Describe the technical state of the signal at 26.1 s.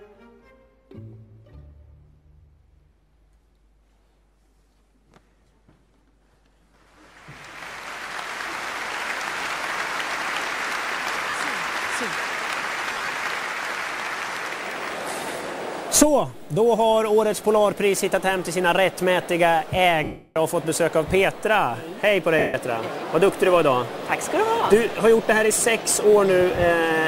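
At 26.1 s the signal is intact, with no audible dropout, distortion, glitch or other technical fault at that moment.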